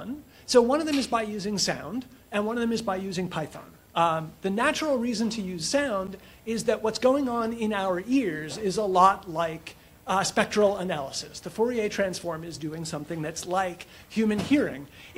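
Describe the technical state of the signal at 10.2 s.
At 10.2 s the signal is intact, with no audible fault at that moment.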